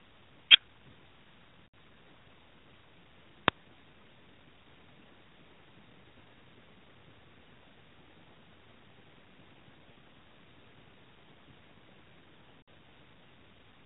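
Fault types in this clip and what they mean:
Lost AMR speech frames: failed frames made the decoder reuse its last good settings with falling gain, so speech smears and fades for 40 to 80 ms.
Uninitialised buffer: a block played before audio was written to it, so stale memory came out as a short, loud crack at 3.48 s.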